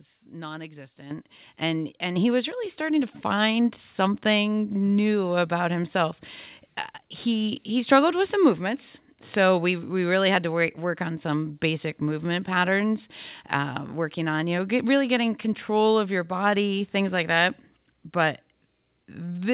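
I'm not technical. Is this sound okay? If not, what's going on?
No. Microphone volume stepped up at 1.11 s, just before "and and he was", and again at 2.16 s, between "and and" and "he was really starting". The call software judged the microphone too quiet and raised its input level, so voice and background both jump louder at once, twice.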